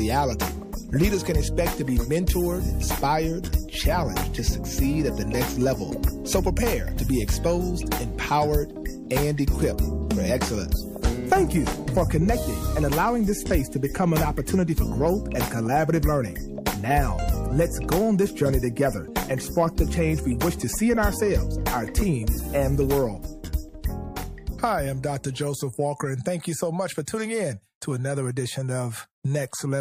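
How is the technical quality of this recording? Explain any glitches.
Two short pre-echo faults mar the recording, at 23.82 to 23.84 s and 27.05 to 27.08 s. In each, a hiss about 21 to 22 ms long comes just before a sharp attack, about 12 dB above the background in the first and about 18 dB in the second. The codec's quantisation noise, sized for the loud onset, fills the whole block, which fits long blocks of about 36 ms with no switch to short ones. The attacks sound softened. A spectrogram shows a broadband smear just ahead of each onset.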